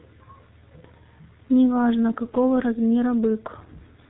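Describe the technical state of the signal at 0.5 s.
At 0.5 s the speech is passing through the G.723.1 codec, which affects the whole clip. The sound points to a rate around 6.3 kbit/s, with 30 ms frames and nothing above 4 kHz. The damage is heavy: the speech sounds muffled and hoarse, and consonants are smeared because the voice model updates slowly.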